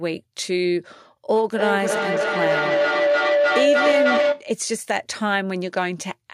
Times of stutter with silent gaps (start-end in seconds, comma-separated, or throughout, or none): none